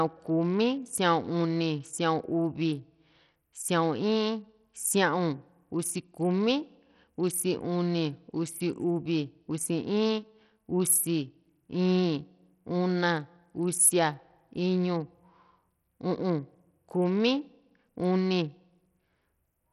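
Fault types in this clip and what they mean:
Bluetooth SBC compression: throughout, treble flickers and drops out under gritty, aliased noise, likely from a low bitrate (around 64 kbps) starving the upper sub-bands of bits.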